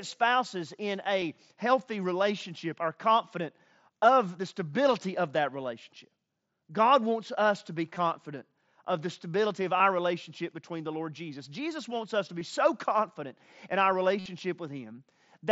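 Speech with brief hiccups where the sound is held as a short buzzy repeat: a near-hidden blip at 1.21 s between "spouses in" and "healthy relationship are confident", 7.95 s, 9.78 to 9.80 s after "of the stability of", 12.39 s, and a longer buzz at 14.19 to 14.26 s after "so confident in our". This is concealed Bluetooth headset packet loss. Lost stretches of 7.5 to 60 ms were filled by repeating recent waveform.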